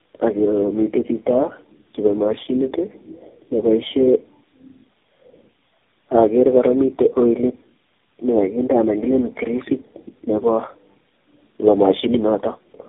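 Speech with tandem speech coding across the whole clip. The audio sounds rough, muffled and warbly, with no content above about 3.7 kHz. That pattern fits a call that was decoded and re-encoded through four speech codecs in a row, an AMR-NB coder at each end with GSM full-rate coders between, joined by G.711 links. Each low-rate coder re-quantises the previous one's artefacts, so the distortion builds up with every stage.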